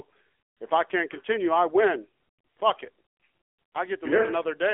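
Speech runs through the AMR narrowband mobile codec for its whole length. Nothing above 3.4 kHz comes through, and the low end thins out below about 300 Hz, giving the boxed-in sound of a phone line. The codec rebuilds the voice from a vocal-tract model excited by sparse pulses. At this rate the damage is plainly audible: a buzzy, synthetic edge. That level of coarseness points to a low mode, around 7.4 kbps.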